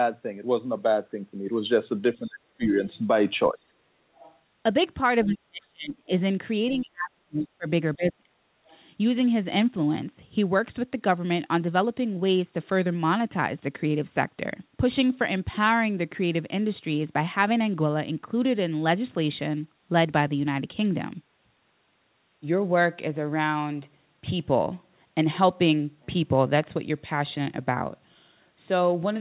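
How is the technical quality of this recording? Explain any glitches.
The speech has two recurring faults in the first nine seconds, both typical of a call where both sides talk at once. The audio is band-limited to 4 kHz, which fits a 64 kbps G.711 mu-law call path.

Speech suppressed in double talk, at 2.19–2.8, 3.53–3.87, 5.25–6.1, 6.79–7.67 and 7.96–8.51 s: the echo canceller likely mistook overlapping talk for echo and attenuated the talker. The voice dips by roughly 25 to 40 dB, sounding gated or cut out.

Other side's voice leaking through, at 2.88–2.98, 4.15–4.38 and 8.68–8.78 s: loudspeaker playback likely reached the microphone without being fully cancelled. Faint, brief scraps of a second voice appear, roughly 30 to 35 dB below the main speech.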